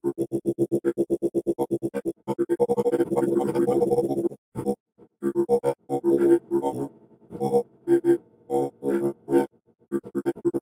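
Imaging from linear upsampling runs through the whole clip. The rate was raised by joining samples with straight lines, which fits a 24 kHz to 44.1 kHz conversion. The top end sounds dulled. Faint mirror images fill 12 to 24 kHz, roughly 40 dB down, adding a light metallic shimmer to bright sounds.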